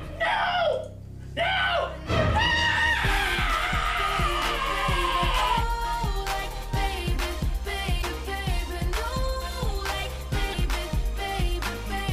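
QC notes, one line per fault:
7.98–8.04 s and 10.49–10.55 s, damaged data in a compressed stream: each event is a disruption of about 56 ms where the decoder hits corrupted bytes, misreads or rejects the frames there, loses sync and searches for the next valid frame header before the sound resumes. This differs from a network dropout or plain click because the disturbance is the decoder's own malformed output from bad data, not simply missing or clipped audio.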